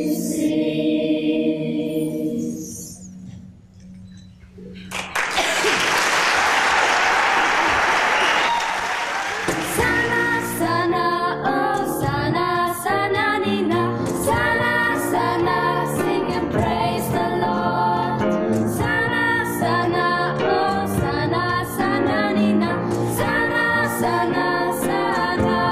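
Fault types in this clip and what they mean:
No technical faults can be heard anywhere in this audio. There is nothing here to list.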